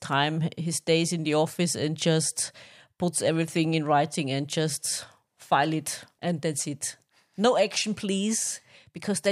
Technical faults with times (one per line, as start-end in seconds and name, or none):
none